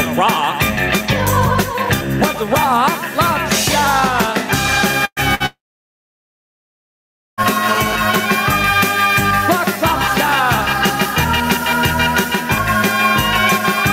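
Gain pumping runs through the whole clip. The input gain is probably set far too high, so a fast limiter clamps down on every loud sound, swinging the level by around 10 dB. The dynamics are left squashed flat.

A burst of packet loss runs from 5.05 to 5.20 s. About 120 ms of audio never arrived, and the receiver stretched the last sound over the gap, fading it until the final 60 ms or so went silent. The sound then resumes further on, skipping the missing stretch.

A second, shorter burst of packet loss follows from 5.35 to 5.43 s. About 60 ms is lost and bridged by the same decaying continuation of the preceding sound before playback jumps ahead.

A long network dropout spans 5.46 to 7.41 s. The last sound smears into a brief fading tail, and then nearly 1.8 s of silence follows. The likely cause is a break in the audio stream. Close to 1.9 s of material is simply gone when the sound returns.

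GSM phone buzz appears from 7.69 to 8.17 s: a hard, raspy 217 Hz drone with dense harmonics, sitting only about 6 dB below the signal. A nearby 2G phone's bursty transmission during a data transfer is being rectified by the audio circuitry, so the buzz arrives as a short, intermittent patch.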